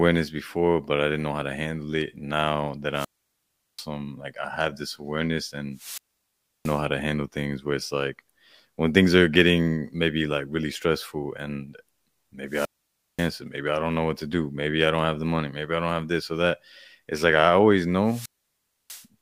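The radio link from an analogue FM wireless microphone keeps fading until the receiver's squelch shuts the output, giving four wireless microphone squelch dropouts in this speech. At 2.93–3.87 s, at 5.73–6.84 s between "I have this awareness" and "to handle things", at 12.47–13.33 s just before "maybe I don't know", and at 18.03–19.07 s after "like I always", hiss rises briefly, then a muted hole of 0.74, 0.68, 0.54 and 0.65 s falls before the speech returns.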